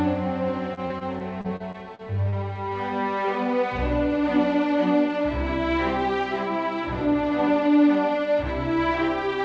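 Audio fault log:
0.74–2.58 s: repeated packet loss (robotic sound). Ten short holes, the longest 37 ms, are each patched by repeating the preceding sound, so the audio turns choppy. A single dropout would leave just one gap.
7.06–7.70 s: jitter buffer speed-up. Roughly a tenth of a second is trimmed in pitch-period slices, so the audio plays at 112% speed with unchanged pitch. A plain resampling speed-up would raise the pitch instead.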